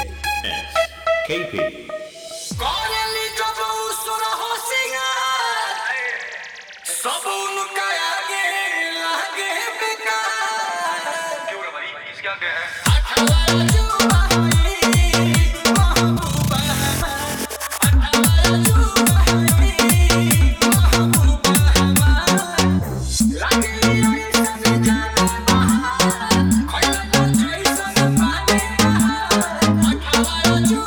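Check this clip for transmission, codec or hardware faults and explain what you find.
Nothing here gives me any reason for concern, as I hear no transmission, codec or hardware trouble anywhere in the clip.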